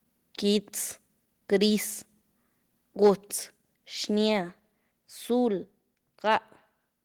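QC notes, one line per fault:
3.04–3.10 s, microphone overload: input gain likely set too high, so peaks run about 4 dB past the converter's limit and get flattened, adding a harsh crackle.
3.07 s, microphone volume stepped down: software likely lowered input gain in one step after the clipped peak, so voice and background drop about 2 dB at once.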